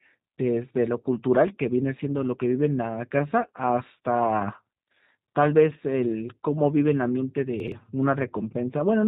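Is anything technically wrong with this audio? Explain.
Yes. Throughout, the speech passes through the G.729 codec at 8 kbit/s, rebuilt from a vocal tract model with no content above 4 kHz, so it sounds muffled, rough and plainly synthetic. From 7.6 to 7.72 s, chunks play out of order: a 40 ms piece lands late, apparently two places back, creating a brief jumbled stretch with hard joins.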